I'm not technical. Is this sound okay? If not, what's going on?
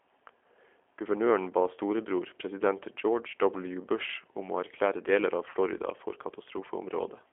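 No. Throughout, the G.729 codec squeezes the speech into a narrow phone-line band, roughly 300 Hz to 3.4 kHz, so it sounds thin, slightly rough and synthetic. At 5.50 to 5.56 s, VoIP packet loss concealed by the speech codec replaces about 40 ms of missing audio with a guessed, stretched, fading sound.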